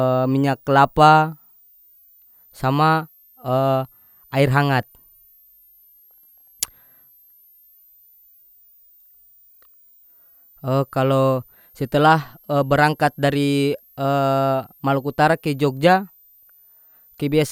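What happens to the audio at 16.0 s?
At 16.0 s a faint, high whistle sits under the speech, well below it in level, its pitch wandering between about 12.2 kHz and 15.6 kHz, mostly near 15 kHz. It is not a momentary event but a switching supply whistle running through the entire recording. A switching power supply falls into an audible burst mode or beats against another supply, and its pitch moves as the load on it changes.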